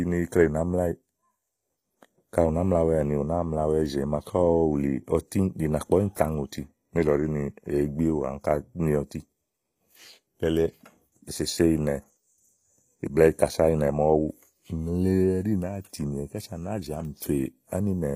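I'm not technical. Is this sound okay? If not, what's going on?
No. The audio was most likely squeezed with HE-AAC compression, which stores only the lower tones and fakes the treble by copying it upward. Across the whole clip, s sounds come out gritty and metallic, and nothing remains above about 15.5 kHz.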